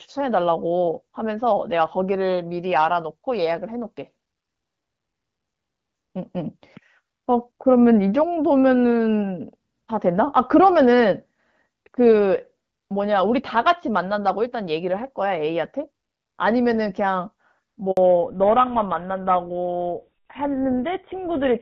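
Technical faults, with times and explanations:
17.91 to 17.97 s, handover gap: the call switched networks and no speech frames arrived for 60 ms, so the sound cuts out abruptly and that audio is lost.
17.97 s to the end, fallback to narrowband: after the handover the call dropped from HD Voice to an older narrowband codec, likely GSM full rate, so everything above 4 kHz disappears and the sound turns duller and rougher.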